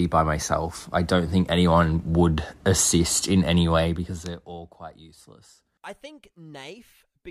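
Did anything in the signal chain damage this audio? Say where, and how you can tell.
Yes. A gain stage in the driver or buffer processing introduced zipper noise between 3.75 and 4.80 s of this speech clip. The level falls by about 20 dB over that stretch, and a fine ticking rides on it at roughly forty steps a second. That rate points to a gain value updated once per buffer with no smoothing, so each jump leaves a small discontinuity.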